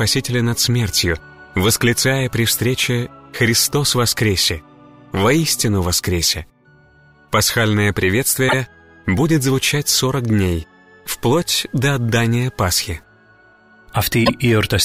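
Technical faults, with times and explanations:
8.48 s and 14.25 s, repeated frames: a short run of compressed frames was delivered twice, so the decoder played the same 52.2 ms block again immediately after itself, which fits a pair of frames of about 26 ms each. Each event is heard as a brief stutter, a tiny slice of sound restarting. Each repeat also lengthens the audio by 52.2 ms.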